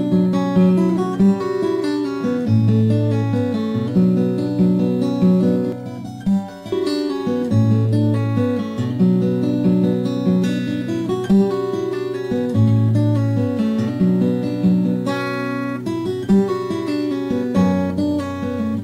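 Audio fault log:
5.72 to 6.72 s, channel delay (comb filtering): one channel lags by around 1.5 ms before the mono sum, cancelling shared content from around 400 Hz upward at evenly spaced frequencies, giving a hollow, phasey tone. The spectrogram shows fixed dark horizontal notch bands for that second.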